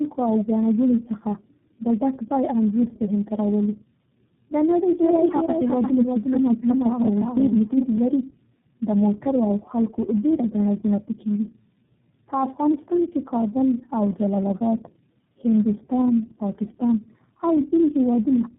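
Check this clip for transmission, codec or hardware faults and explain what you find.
Two faults here: tandem speech coding across the whole clip, and a doubled audio track for a few seconds in the middle.

The tandem speech coding runs for the full length. The speech has passed through about three low-bitrate speech coders in a row, something like G.729A, then GSM full rate, then iLBC, with plain telephone links in between. Each coder throws away detail and then works on the previous one's leftovers, so the damage stacks. The result is rough, muffled and warbly speech, with nothing above 3.8 kHz.

The doubled audio track starts at 5.04 s, right after "د نړۍ", and runs to 7.98 s. A second full-band copy of the same speech trails the original by roughly 0.4 s, about 5 dB quieter. It sounds like a hard echo with no decay and no room colour, and it switches on and off abruptly. The likely cause is the audio being captured a second time through a slower path, or an edit that left two out-of-step copies overlapping.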